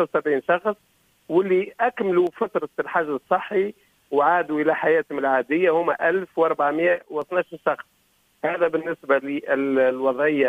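At 2.27 to 2.32 s and again at 6.98 to 7.22 s the sound abruptly drops by about 6 dB, likely because one channel drops out before the mono sum.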